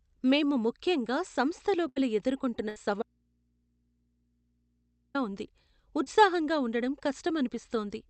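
Speech carried over an Opus call path whose top end stops near 8 kHz, with three kinds of fault. Two bursts of packet loss, at 1.88 to 1.97 s and 2.69 to 2.77 s, each lose roughly 70 to 80 ms and leave a held, fading continuation of the last sound before the speech resumes further on, unlike a hard cut. From 3.02 to 5.15 s there is an audio dropout to a faint residue: the speech stops abruptly for 2.12 s and only mains hum remains, about 40 dB down, most likely an open or broken input, not a pause or fade. At 6.04 to 6.07 s a short concealed packet loss of about 20 ms leaves only a brief smear, far shorter than the bursts.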